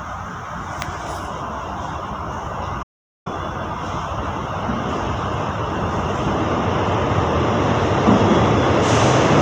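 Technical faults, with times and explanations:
2.83 to 3.26 s, audio dropout to silence: the sound cuts out mid-flow for about 0.43 s, then snaps straight back. The gap is dead digital silence with no room tone at all. The input likely dropped briefly while the recorder kept writing silence, so that stretch is simply gone.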